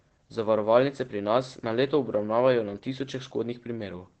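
Speech carrying Opus voice compression throughout: nothing above 8.3 kHz survives, and the coarse SILK-style linear-prediction coding leaves the voice audibly muffled, slightly hoarse and robotic. This wideband sound points to a low bitrate, consistent with roughly 12 kbps.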